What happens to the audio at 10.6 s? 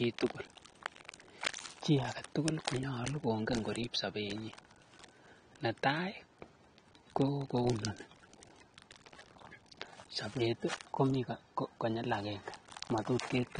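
At 10.6 s, as throughout the clip, the speech bears the marks of likely AAC compression at a low bitrate, plausibly near 32 kbps: the encoder discards everything above about 9.8 kHz and quantises coarsely, leaving the speech dull, smeared and fizzy on sibilants.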